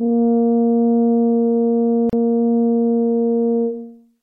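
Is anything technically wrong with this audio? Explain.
Yes. There is a gap at a join of encoded pieces in this music. At about 2.10 s, the sound drops out for roughly 34 ms and resumes at 2.13 s. The music appears to have been encoded in separate pieces and joined untrimmed. Each encode keeps its leading delay silence and its padded final frame. The result is a short hole in continuous music with smeared edges. The music then resumes exactly where it stopped.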